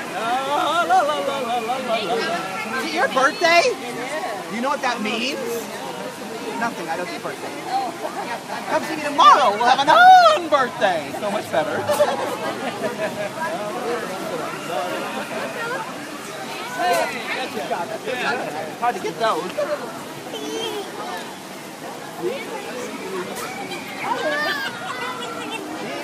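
No technical faults can be heard anywhere in the audio.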